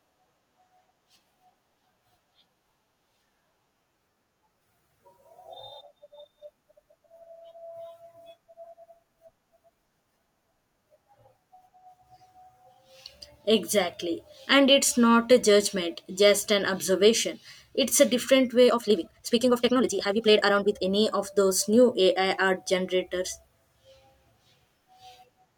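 From 18.63 to 20.85 s, after "a different" and before "of those new", there is a time-stretched section. Software likely squeezed this stretch to fit a shorter length, dropping short pieces to hold pitch while playing it 1.8 times faster, so the speech turns abruptly rushed.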